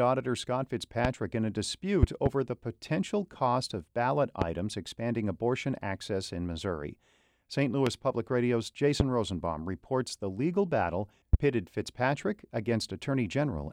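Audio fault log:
1.05–1.08 s, 2.03–2.29 s (two pops), 4.42–4.44 s, 7.87–7.89 s, 9.00–9.03 s, 11.33–11.36 s: loud pop. Sharp thumps peak about 20 dB above the speech, just before "in a", between "in a" and "the potential cost of", and after "reports the legal battle". A sudden voltage pulse, likely from a switch, plug or static discharge, is shaped by the circuitry. Unlike a dropout, the speech continues uninterrupted beneath each pulse.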